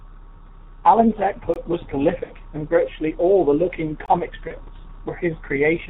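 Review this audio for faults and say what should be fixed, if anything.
The whole recording runs through the G.723.1 codec at 6.3 kbit/s, heavily degraded: speech sounds muffled and hoarse, with smeared consonants. Its slowly updated 30 ms frame model cannot track fast articulation. A spectrogram shows nothing above 4 kHz and blocky, coarse formant bands. Use a wideband codec at a higher bitrate.

Gaps between chunks appear at 1.54–1.56 s and 4.06–4.08 s, each about 21 ms, 2.5 s apart. Each is a hard-edged hole where one chunk ends and the next starts late, which fits codec padding or a late-starting player. The waveform drops to silence, and the spectrogram shows a thin vertical blank stripe. Play chunks back gaplessly, trimming the padding.

VoIP packet loss concealed by the speech codec hits 2.23–2.32 s, just before "and virtually all the", where 60 ms (two frames) went missing, and 4.48–4.52 s, where one 30 ms frame was lost. 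The decoder repeated its last pitch and filter with falling gain, producing a fading stretch. On a spectrogram this shows as flat, repeated harmonics, and the waveform shows a decaying envelope. Add jitter buffering or forward error correction on the network path.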